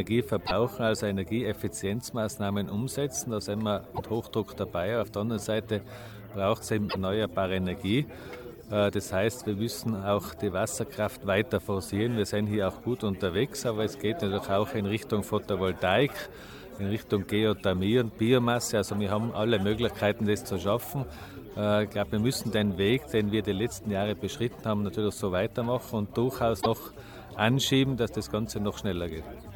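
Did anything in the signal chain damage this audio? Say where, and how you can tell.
Yes, at the codec stage: damaged data in a compressed stream. Short glitches of about 80 to 95 ms hit at 0.43, 3.91, 6.86 and 26.58 s. Corrupted bytes make the decoder misread frames and lose sync until it finds the next valid frame header.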